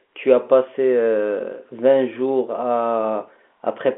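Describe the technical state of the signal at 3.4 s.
At 3.4 s the audio is intact, with only the expected telephone-line character of G.711 coding, a band that tops out below 4 kHz.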